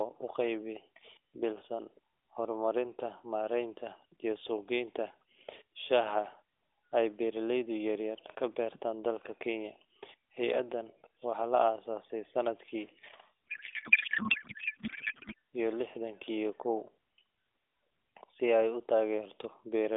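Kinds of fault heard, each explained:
Codec payload misread: From 13.51 to 15.34 s, just before "iyo lixdan", the speech turns into garbled noise and warble that barely tracks it. The decoder unpacks the AMR frames with fields in the wrong places. This fits octet-aligned packing read as bandwidth-efficient.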